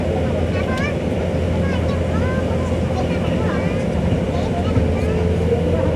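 Throughout, a wrong sample rate plays the sound 1.45 times too fast and about 6.45 semitones high, which fits 22 kHz audio run at 32 kHz; spectrogram features sit higher and squeezed in time.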